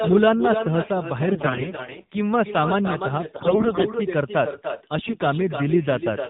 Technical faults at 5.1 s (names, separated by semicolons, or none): echo with no canceller; AMR narrowband mobile codec; AMR bit errors